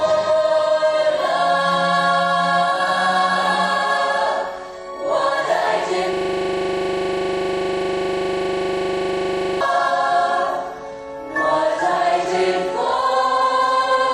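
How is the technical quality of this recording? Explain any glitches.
The recording has one glitch, a system hang loop from 6.13 to 9.61 s. During that stretch a single 40 ms fragment of audio repeats exactly, close to ninety times, at a rate of 25 Hz. The playback system stalled while the sound hardware kept cycling through the same ring buffer, replaying whatever it last held. With a 40 ms loop, the result is a rapid machine-gun stutter, or a rattling buzz at 25 Hz, until normal audio resumes.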